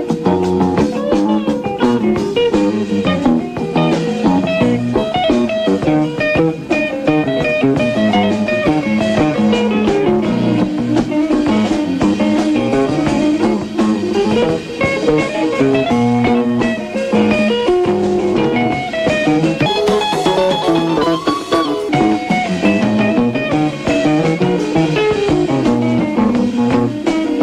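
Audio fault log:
19.66–21.89 s, wrong sample rate: for just over two seconds the sound lurches upward and rushes, running about 1.38 times too fast and sitting roughly five and a half semitones sharp before dropping back to its proper speed and pitch. Speed and pitch shift together because the samples are being read out faster than they were captured with no conversion in between, a ratio that fits material recorded at 32 kHz but played at 44.1 kHz.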